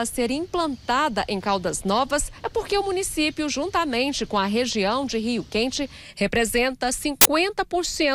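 At 7.21 to 7.25 s, file tags played as audio: an embedded cover picture's compressed bytes are read as samples. The result is a hard-edged burst of very loud white noise.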